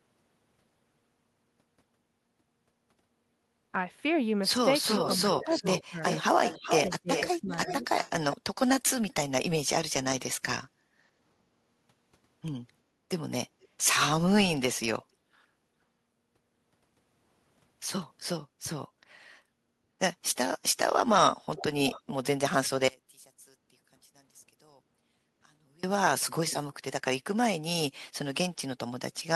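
Speech runs through this clip, and several stretches carry technical faults. From 4.87 to 8.37 s a delayed copy of the speech trails the talker by 374 ms, nearly as loud as the original. Later, shorter repeats appear from 13.63 to 13.95 s (470 ms behind, very faint) and from 21.56 to 22.11 s (578 ms behind, noticeably quieter than the speech). This is echo leak: the far end was likely on a loudspeaker, and its echo canceller let part of what the microphone captured travel back down the line. Inside that first echo stretch, the talker's own voice sinks sharply, by roughly 30 dB between 5.01 and 5.99 s and by roughly 25 dB between 6.74 and 7.85 s, with about half a second and under half a second actually pulled down in each span. That is speech suppressed in double talk: with both ends active at once, the canceller likely could not tell the local talker from the returning echo and ducked the whole signal. 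From 10.69 to 11.18 s the room sound behind the speech drops by about 14 dB for roughly half a second and then comes back. This is background gated by the echo canceller, which clamped the microphone down hard while the loudspeaker was playing and released it afterwards. Finally, from 22.88 to 25.83 s the audio collapses by about 27 dB into a faint residue. That points to one channel inverted: one stereo side likely had its polarity reversed, so the centred speech cancels when the two channels are summed to mono, leaving only their small differences.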